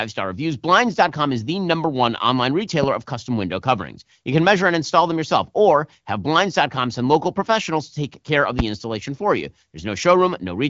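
At 2.83 to 2.86 s and again at 8.59 to 8.62 s a loud pop cuts in, the second stronger, roughly 15 dB above the speech against about 10 dB. Each is a single sharp thump, likely a voltage pulse from static or a switch, and the speech carries on underneath rather than dropping out, unlike a gap or packet loss.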